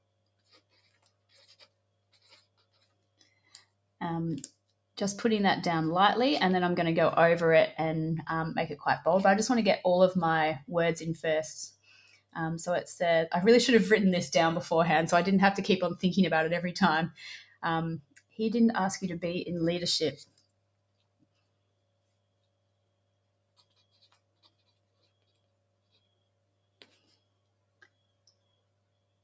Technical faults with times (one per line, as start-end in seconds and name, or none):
0.00-29.23 noise suppressor applied to music or sounds
0.00-4.01 sound cut by the noise suppressor
4.49-4.97 sound cut by the noise suppressor
11.70-12.36 sound cut by the noise suppressor
17.40-17.63 sound cut by the noise suppressor
17.98-18.39 sound cut by the noise suppressor
20.12-29.23 sound cut by the noise suppressor